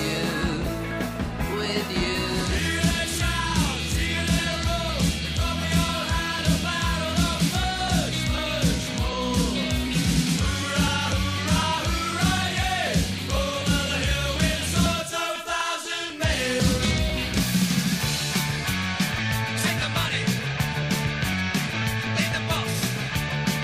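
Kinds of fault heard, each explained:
Periodic USB or driver dropouts: a recurring stall in the USB link or audio driver skips about a millisecond of audio every 0.249 s, from 0.17 to 23.56 s, giving a steady tick four times per second. Their metronome-even spacing distinguishes them from irregular packet-loss clicks.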